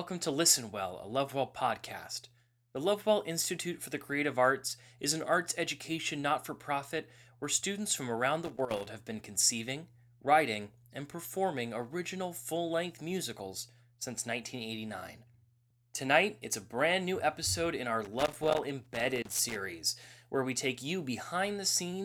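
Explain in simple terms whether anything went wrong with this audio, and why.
Loose connector crackle breaks into the speech from 8.45 to 8.86 s, just before "have been conceiving writing", and again from 18.05 to 19.56 s, after "new episode in our". A worn or dirty plug contact keeps cutting in and out, producing irregular scratchy bursts.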